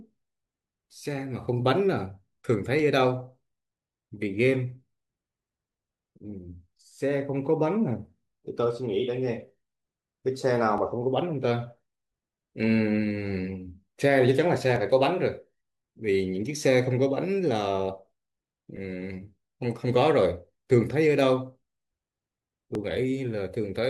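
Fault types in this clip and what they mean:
Overlap between stream segments: at 2.79, 10.78, 14.76, 18.77 and 22.75 s the speech gives a brief click or tiny skip. Adjacent stream segments carry timestamps that overlap, so the player discards the supposed duplicate, but that audio was never actually repeated. Roughly 11 to 18 ms of real sound disappears each time and the waveform jumps. The events fall on a 4-second grid, matching 4-second segment boundaries.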